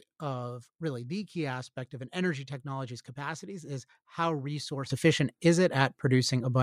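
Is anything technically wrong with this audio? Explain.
Yes. At 4.9 s a sudden gain jump lifts speech and background noise together by about 12 dB until the end, likely an unramped digital gain change, not a gradual fade.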